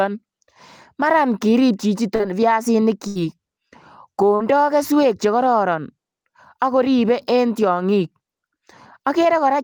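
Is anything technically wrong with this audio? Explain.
Yes, there are two kinds of network fault in this speech. Around 2.15 to 2.22 s and again at 4.35 to 4.43 s there is a brief smear where about 40 ms of audio is filled in. This is short concealed packet loss: the receiver extended the last sound to cover packets that arrived too late. At 3.07 to 3.18 s a sound is held and fades for about 80 ms, then the speech jumps ahead. This is a burst of packet loss, where consecutive packets were lost, concealed and dropped.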